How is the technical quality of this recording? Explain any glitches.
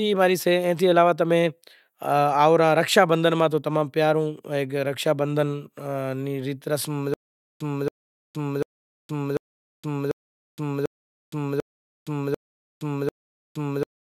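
The recording breaks down partway through. From 7.14 s to the end, a stutter with silent gaps repeats the same 0.28 s fragment nine times, each followed by about 0.47 s of dead silence, a steady 0.74 s cycle. The likely cause is a stalled stream or player replaying its last buffer on each retry. On a waveform or spectrogram this shows as identical blocks separated by flat, empty gaps.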